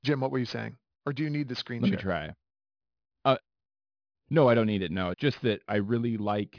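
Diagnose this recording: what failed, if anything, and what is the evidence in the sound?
Sibilants sound gritty and metallic through the whole clip, with hiss-like energy landing at pitches unrelated to the speech, and the spectrum runs hard up to a wall at 5.5 kHz. This is aliasing from the sample-rate conversion stage. The audio was resampled downward, which fits a drop from 48 kHz to about 11 kHz, without an anti-aliasing filter, so content above 5.5 kHz folded back below it, sitting roughly 25 dB under the speech.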